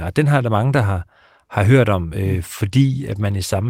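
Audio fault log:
2.26–3.70 s, call bitrate drop: right after "har hørt om" the speech turns coarse and muffled to the end, as the encoder falls from about 40 to 16 kbps and trims high frequencies. Unlike a dropout or packet loss, the sound stays continuous, just degraded.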